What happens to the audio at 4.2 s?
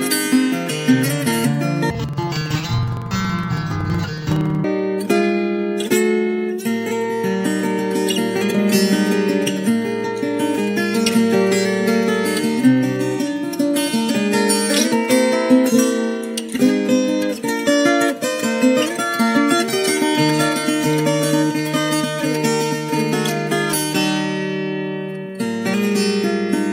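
At 4.2 s the audio is inside a stretch of interleaved audio read as planar, running from 1.90 to 4.68 s. Alternating left-right samples were split so each block's first half fed one channel and its second half the other, so both play at half speed. The result is an octave low, doubled and choppy, chopped into 46.44 ms blocks (21.5 Hz), which fits a 2048-sample block. Unlike slowed playback, the overall pace stays right.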